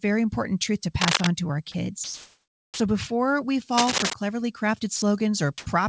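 Cable scratch noise hits this speech recording at 1.01 to 1.27 s, right after "important truth to", and again at 3.77 to 4.14 s, after "before we": dense, uneven bursts of scratching roughly as loud as the voice itself. This is likely a worn cable, connector or control being moved, so its contact resistance jumps about rapidly and injects noise onto the signal for as long as the movement lasts. Sound dropped by the voice detector occurs at 1.72 to 1.74 s, just after "to our", and at 4.96 to 5.02 s, where 20 ms and then 60 ms of the speech vanish under steady noise. The sender's detector likely mistook these quiet stretches for background and stopped transmitting, and the receiver filled each gap with synthetic comfort noise until the detector triggered again. Comfort noise in place of the background appears at 2.04 to 2.80 s and at 5.58 to 5.66 s, where the real background with its texture gives way to a flat, featureless hiss. 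In the first stretch it is about 2 dB quieter than the true background. In the second it is about 36 dB louder, a clear jump against a background that otherwise sits about 56 dB below the loudest speech. The likely cause is discontinuous transmission, where the sender goes silent between utterances and the receiver synthesises noise roughly shaped like what it last heard. An onset clipped by the voice detector sits at 2.70 to 2.80 s, at the end of that first comfort-noise stretch: the first 100 ms of the returning sound are missing, so it begins abruptly without its soft attack. This is likely because the detector was slow to recognise that sound had resumed, and the receiver kept playing comfort noise over those opening moments. The call path carries nothing above 8 kHz, consistent with a wideband codec such as G.722 at 64 kbps.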